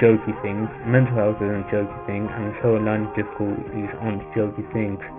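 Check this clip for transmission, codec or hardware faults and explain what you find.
One fault here, and it runs the whole clip: aliasing. The audio was downsampled without an anti-alias filter, so everything above 3 kHz folds back as gritty, metallic tones roughly 20 dB down, which fits a drop to around a 6 kHz rate.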